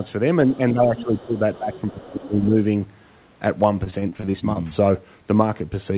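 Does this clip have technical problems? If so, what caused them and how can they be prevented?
Yes. Here's what's going on.

Speech suppressed in double talk: from 0.46 to 1.73 s and again from 1.92 to 2.55 s, the talker dips by up to about 10 dB and then about 15 dB. That's likely the echo canceller mistaking overlapping talk for echo and ducking everything. To prevent it, use a headset or an echo canceller with better double-talk detection.

Other side's voice leaking through: scraps of a second voice show up at 0.97 to 1.24 s (about 15 dB under the talker), 1.53 to 1.58 s, 1.76 to 2.05 s and 2.21 to 2.28 s (about 20 to 30 dB down). The loudspeaker playback is likely reaching the mic without being fully cancelled. Headphones or lower speaker volume would stop it.

Repeated packet loss (robotic sound): between 3.84 and 4.57 s the audio goes choppy. A run of short holes, none longer than about 27 ms, gets patched by stretching the previous sound, and roughly a quarter of that stretch is filler. 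A steadier connection or a larger jitter buffer would help.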